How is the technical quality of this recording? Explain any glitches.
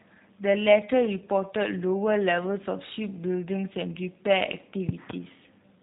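The technical quality is limited. Two faults can be heard.

A G.729 codec runs through the whole recording. The speech has been rebuilt rather than carried as a waveform. A vocal tract filter, a pitch predictor and a few pulses per 10 ms frame stand in for the original signal. Nothing above 3.8 kHz survives, so the sound is dull and narrow. The damage is plainly audible. The speech sounds rough and slightly synthetic. The coarseness fits a rate of about 8 kbit/s.

A loud pop occurs between 4.89 and 5.13 s. Two sharp pops arrive in quick succession, well above the level of the speech. The speech carries on underneath them. The likely cause is a sudden voltage step or pulse, from a plug, a switch, static or a driver glitch. The circuits downstream shape that pulse into the short, hard clicks heard here.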